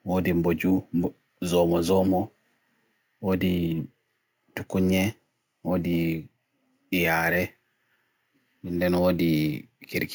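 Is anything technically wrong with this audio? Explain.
Yes. Throughout the speech there is imaging from sample-and-hold upsampling. The rate was raised by repeating samples with no smoothing filter, which fits a 16 kHz source converted to 48 kHz. Mirrored copies fill 8 to 16 kHz at about 22 dB below the signal, heard as a bright metallic fizz that follows the speech level.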